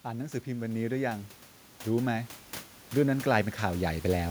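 From 0.05 to 2.38 s, automatic gain rising lifts the level by about 8 dB, then again from 2.96 to 4.26 s by about 6 dB. Speech and the room noise, sitting about 21 dB below it, swell together. On a waveform the envelope widens steadily; spectrogram energy brightens across all bands at once.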